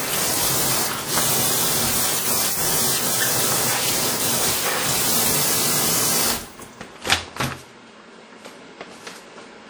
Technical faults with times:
0.00-9.69 WMA compression

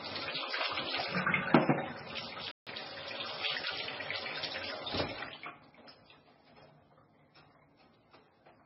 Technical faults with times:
0.00-8.65 MP3 compression
2.51-2.67 playback stall

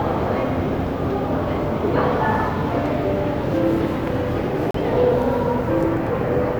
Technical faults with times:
4.71-4.74 Bluetooth stall

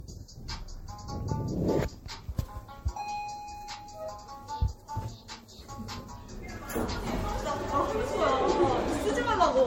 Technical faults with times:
0.00-9.66 generation loss

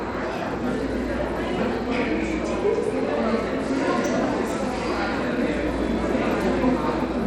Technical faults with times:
0.00-7.26 Bluetooth SBC compression

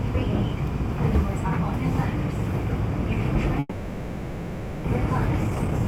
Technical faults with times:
3.59-4.88 long network dropout
5.44-5.80 jitter buffer speed-up

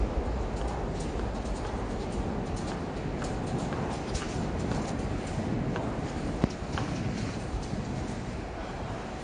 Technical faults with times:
0.00-9.23 AAC compression

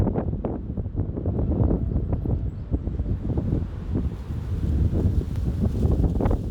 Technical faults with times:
5.36 overlap between stream segments

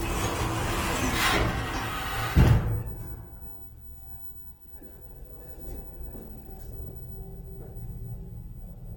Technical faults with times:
0.00-8.97 Opus compression

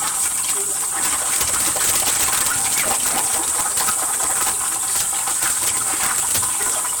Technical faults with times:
0.00-7.00 integer overflow

